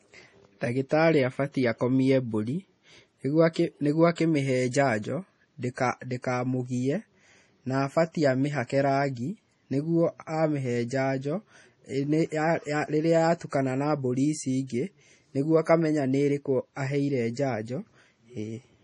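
Throughout, the speech sounds watery and swirly, with chirpy sibilants and nothing above 11.4 kHz, likely heavy MP3 compression at a bitrate as low as 32 kbps.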